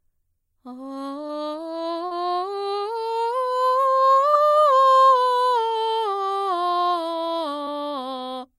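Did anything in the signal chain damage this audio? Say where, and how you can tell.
Yes. Brief smears in the music at 1.27–1.31, 2.07–2.13, 4.31–4.35 and 7.65–7.69 s are short concealed packet loss: 20–40 ms network gaps patched by extending the preceding sound.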